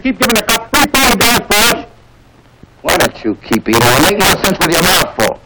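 Violent, sharp cracks burst out on every loud peak across the whole clip, far harsher than ordinary clipping. This is integer overflow: the signal was driven about 9 dB too hot, and around 7 percent of samples wrapped to the opposite extreme instead of being limited.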